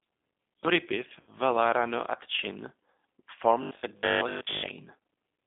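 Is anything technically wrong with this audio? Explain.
Yes. Three faults can be heard.

G.729 codec damage runs through the whole clip. This 8 kbit/s codec rebuilds speech from a vocal tract model, a pitch predictor and a few pulses per short frame. The line band here is about 150 Hz to 3.6 kHz, so the low bass and all the upper brightness are missing. The coding damage is plainly audible. The speech sounds thin, slightly rough and synthetic.

VoIP packet loss concealed by the speech codec occurs from about 1.2 to 1.3 s. Roughly 60 ms of audio went missing, which fits two lost packets. The decoder filled the gap by extending its last pitch and filter settings while lowering the gain. That part of the speech smears into a fading buzzy tone or coloured noise. The next frames build on that guess, so the speech stays weak briefly after the gap.

Robotic sound from repeated short buffers appears from 3.63 to 4.83 s. 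The speech turns rigid and metallic, with a fixed 50 Hz buzz underneath, and it still loosely follows the original speech. The likely cause is new audio arriving too seldom. The software then replays the last 20 ms over and over, which sets that 50 Hz pitch. Most of the real audio in this stretch is skipped and replaced by repeats.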